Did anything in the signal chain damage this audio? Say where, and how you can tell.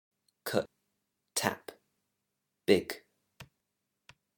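Yes. Damaged data in a compressed stream is audible as a brief blip at 0.66 s and a short glitch from 3.60 to 3.63 s, a codec-stage fault. Corrupted bytes made the decoder misread those frames and lose sync until it found the next valid frame header.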